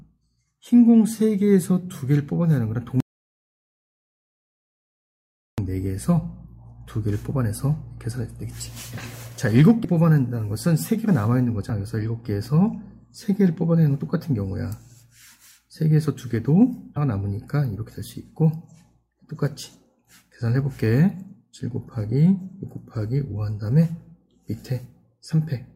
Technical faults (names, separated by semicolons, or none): audio dropout to silence; damaged data in a compressed stream